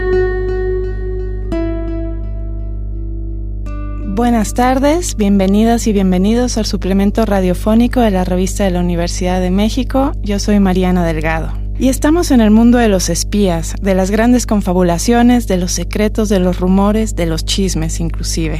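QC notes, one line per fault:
Throughout: mains hum. A steady low tone sits under the entire clip at 50 Hz, with some low harmonics stacked above it, which is what power-line energy sounds like once it leaks into the signal path. A ground loop between connected equipment or magnetic pickup from a nearby transformer would couple the supply frequency in this way. The hum is strong, only about 5 dB below the wanted signal, so it stays plainly audible and muddies the low end.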